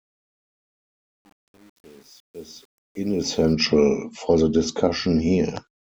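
The speech fades in over the first 3.53 s, and from the start to about 3.18 s its quiet portion sounds gritty. This is truncation distortion on a fade: an undithered level stage, consistent with 8 bits, reduced the low-level waveform to coarse square steps.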